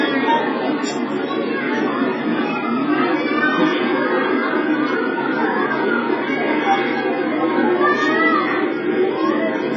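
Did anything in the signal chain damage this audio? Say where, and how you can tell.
Yes, at the codec: heavy AAC compression, likely at a very low bitrate around 12 kbps, removes everything above 7.5 kHz throughout, leaving dull, smeared sound.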